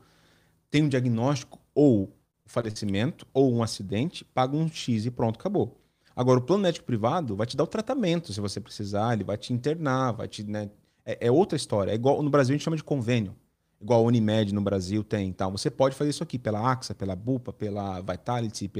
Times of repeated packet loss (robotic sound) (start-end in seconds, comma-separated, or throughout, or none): 2.01-2.77